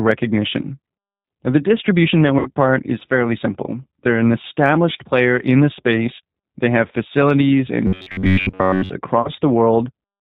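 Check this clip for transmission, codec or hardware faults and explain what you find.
Yes, there are three kinds of fault: low-rate codec coding throughout, two gaps filled in by the decoder, and a stretch of robotic buzzing.

Throughout the clip, the speech has been through the G.729 codec, plainly audibly. The sound fits the G.729A variant at 8 kbit/s. The decoder rebuilds speech from a vocal tract filter model, a pitch predictor and a few coded pulses per frame rather than from the waveform itself. Nothing above 4 kHz survives, so the speech sounds band-limited, rough and somewhat synthetic.

At 2.39 to 2.50 s and again at 9.22 to 9.31 s, there is VoIP packet loss concealed by the speech codec. About 60 ms of audio is missing in the first gap, which fits two lost packets, and about 30 ms in the second, which fits one. With no data arriving, the decoder kept extending its last pitch and filter settings while lowering the gain frame by frame. 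The speech is drawn out into a buzzy tone or coloured noise that fades, and because each frame depends on the one before, the error carries into the following frames.

From 7.87 to 8.92 s, the speech turns into robotic sound from repeated short buffers. This is likely caused by new audio arriving too seldom, so that the playback side filled the gaps by looping its most recent short segment while the real audio was skipped. The loop repeats at 93.8 Hz, which points to segments of roughly 10.7 ms. Most of the audio in this stretch is replayed rather than new, so the speech becomes a rigid, metallic buzz that only loosely follows the original.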